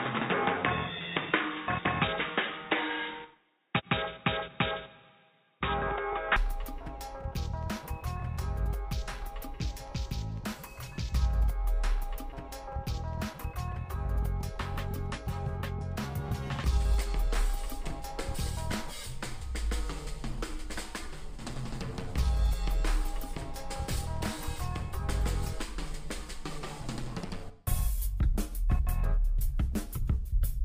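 Input likely switched to a poorer device until 6.36 s: nothing above 3.8 kHz passes, so the audio sounds dull, then clears with no gap.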